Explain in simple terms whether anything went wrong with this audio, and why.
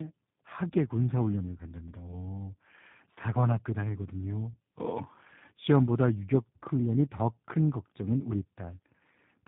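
Something did go wrong here: the speech suffers from tandem speech coding, and it runs the whole way through. The sound sounds like it went through two different voice squeezers one after the other, with an ordinary phone line in between. Each one tidies up what it thinks is speech, but the second is working on the first one's leftovers, so the roughness and warble pile up. Nothing above about 3.8 kHz survives either, which is why it sounds muffled.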